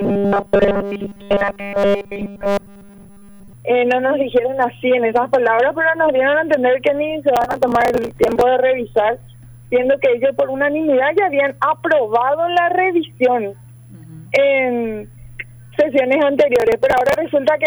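From 0.01 to 3.53 s the sound has a rigid, metallic buzz at 200 Hz. This is robotic sound from repeated short buffers. The likely cause is that new audio arrived too seldom, so a 5 ms slice was replayed over and over to fill the time. The buzz pitch matches that 5 ms period. Nearly all of the passage is repeats. The real audio in between was dropped. The sound's rough shape still comes through under the buzz.

Processor overload crackle appears from 7.36 to 8.41 s and again from 16.56 to 17.16 s. Each burst is a gritty tearing laid over the sound. It stops when the load eases. The processor could not finish very small buffers on time. These buffers were well under a millisecond each. Many deadlines were missed in a row. Each miss skipped a sliver of audio and left a hard-edged gap. The first burst points to dozens of misses. The second is shorter, with fewer misses.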